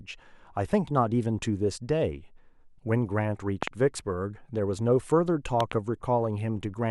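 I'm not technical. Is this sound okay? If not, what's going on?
No. Something in the recording chain most likely received a sudden jolt of electricity, such as a plug being nudged, a switch, static, or a brief glitch in the audio hardware, and that jolt went straight into the signal. This is called a loud pop. You hear it twice, at 3.63 to 3.70 seconds and at 5.60 to 5.74 seconds. Each time it's a quick double pop, much louder than the speech, while the talking carries on underneath.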